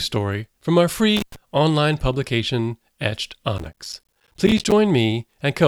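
Intermittent contact from 1.17 to 1.36 s, between "from our" and "online publication": a loose connection breaks for about 100 ms, so the speech drops out abruptly, with crackle at the edges where the contact opens and then closes again.

Processor overload crackle from 3.58 to 4.72 s: the processor falls behind and misses a long run of short audio buffers, which fits buffers of roughly 5 ms with around fifty missed. Each miss leaves a brief silent gap with hard edges, and together they form a gritty crackle across the speech.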